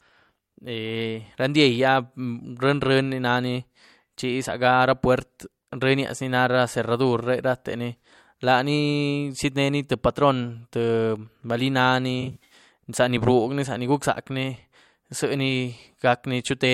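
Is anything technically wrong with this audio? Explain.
Yes. From 12.21 to 12.53 s the speech smears into brief noisy, blurred patches. This is AAC frame loss with concealment. About 170 ms of audio went missing in gaps of up to about 70 ms, and the decoder filled each one by extending the last good spectrum.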